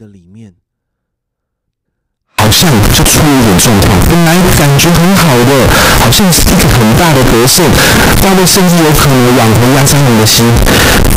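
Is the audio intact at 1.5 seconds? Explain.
Yes, at 1.5 seconds the audio is intact, with no dropout, click, distortion or other technical fault to be heard there.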